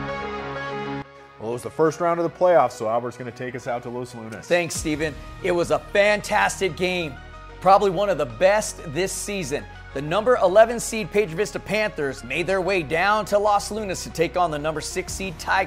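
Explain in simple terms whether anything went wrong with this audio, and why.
Nothing went wrong here; the audio holds steady the whole way, with no dropouts, glitches or damage anywhere along it.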